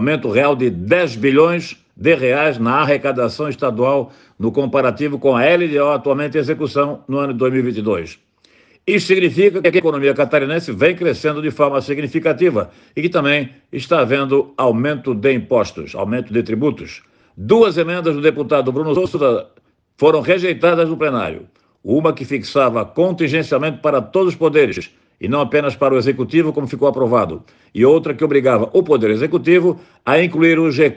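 A short garbled flutter occurs at 9.64–9.80 s, 18.96–19.16 s and 24.72–24.82 s. These are frames out of order: two adjacent blocks of about 72, 96 and 48 ms respectively were decoded swapped, so halves play exchanged with no time lost.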